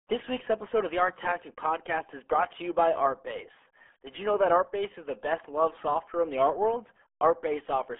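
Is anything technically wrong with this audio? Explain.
Yes. Throughout the clip the speech has passed through the RealAudio 14.4 codec, a dial-up era speech coder whose very low data rate, which points to about 8 kbit/s, forces it to discard most spectral detail. The band is squeezed to roughly 300 Hz to 3.4 kHz, with nothing above 3.7 kHz, so the voice sounds boxed and muffled. The heavy coding damage adds a gargly roughness to the speech.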